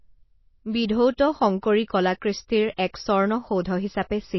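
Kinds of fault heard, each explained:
MP3 compression: the speech sounds watery and swirly, with nothing above 5.8 kHz, likely an MP3 encoder short of bits, fitting a bitrate near 24 kbps.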